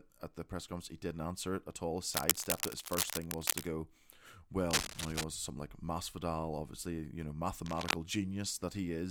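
Dense, uneven scratching about as loud as the speech cuts in after "answer it at all" from 2.14 to 3.69 s, again from 4.71 to 5.24 s, and after "obviously you know" from 7.66 to 7.94 s. This cable scratch noise likely comes from a worn connector being moved.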